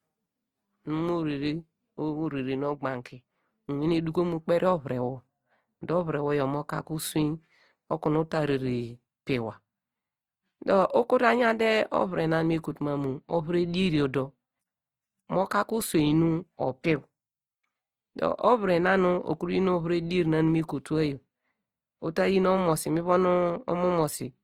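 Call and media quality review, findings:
Opus compression, whole clip. Speech sounds grainy and rough, with noisy fill where detail should be. Damage plainly audible. Likely cause: Opus music (CELT) mode starved of bits, filling bands with folded or noise energy instead of leaving holes. Fits a rate near 24 kbps. Bandwidth stays fullband, content reaching about 19.8 kHz, so no muffling.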